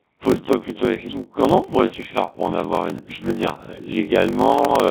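Codec 2 vocoder coding throughout this speech: only pitch, voicing, energy and spectral envelope survive, resynthesised from sine waves, giving a heavily robotic, buzzy sound that fits the 1.3 kbit/s mode. A block size mismatch (padded) runs throughout too: zero-filled gaps in every block buzz at 46.9 Hz and slow playback to 0.861 times normal speed at roughly unchanged pitch, which fits a 1024-sample read block. Bit errors on digital voice radio strike from 4.51 to 4.67 s, where flipped bits at an error rate of a few percent, spanning what sounds like three vocoder frames, throw pitch, level and tone into warbling, bleeping gibberish.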